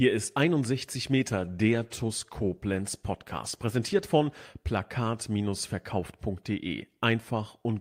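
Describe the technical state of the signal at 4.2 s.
The speech sounds coarse, watery and dulled at 4.2 s. It is inside a call bitrate drop from 1.33 to 4.49 s, which fits the encoder falling from about 64 to 23 kbps and coding more roughly.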